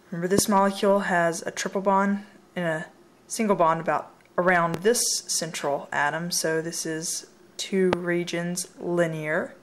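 A sudden voltage step or pulse, likely from a plug, a switch, static or a driver glitch, was added to the signal path three times, leaving a loud pop in the audio at 0.39–0.41 s, 4.74–4.77 s and 7.93–7.95 s. Each is a single sharp pop about 23 ms long, standing roughly 20 dB above the surrounding sound at the first and third, and about 15 dB above it at the second, while the audio continues underneath.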